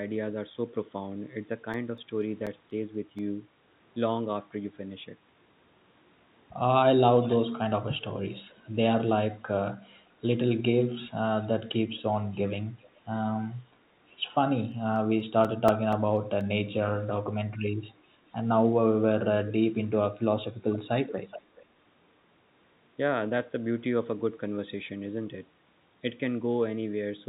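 From 1.74 to 3.19 s, and again from 14.72 to 16.41 s, CD scratch ticks appear: seven and then eight brief clicks, the longest only a few milliseconds, at a steady rate of about five a second. That rate is one disc rotation, where the player concealed samples its error correction couldn't rebuild. The regular spacing distinguishes them from random clicks.

At 7.22–7.37, 7.99–8.57, 12.14–13.0, 18.26–18.35 and 20.73–21.63 s, an echo leak is heard: a faint copy of the speech trailing by about 0.40 to 0.42 s, quiet at first, very faint around 12 and 18 s, strongest near 21 s. This is likely a far-end loudspeaker's sound escaping an incomplete echo canceller. The fixed lag marks it apart from room reverberation. The narrowband call path, with nothing above 4 kHz, colours this echo.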